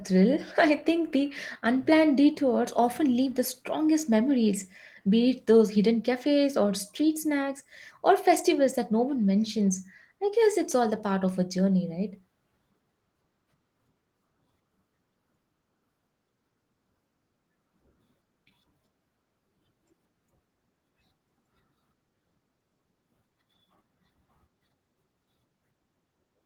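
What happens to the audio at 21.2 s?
At 21.2 s the speech carries on intact, with no fault at that moment.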